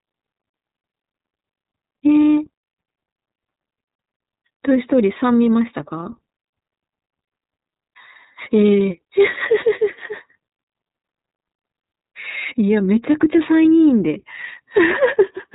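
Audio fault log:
Throughout, iLBC codec: the speech is intelligible but thin, rough and slightly synthetic, with plainly audible coding damage and nothing above 3.8 kHz, so sibilants and airy detail are gone. This narrowband VoIP codec rebuilds the excitation of each frame independently of the one before, which breaks up the natural continuity of the voice and gives it that grainy, buzzy texture. The roughness fits the 30 ms frame, 13.33 kbps mode.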